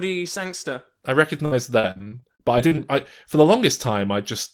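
From 1.45 to 2.79 s, repeated packet loss leaves a dozen or so gaps, up to 59 ms each, patched by stretching earlier sound, so the speech turns choppy and robotic.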